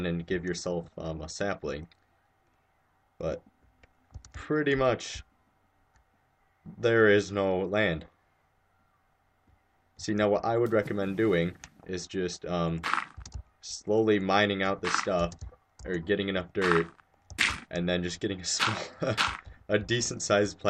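No technical faults are audible.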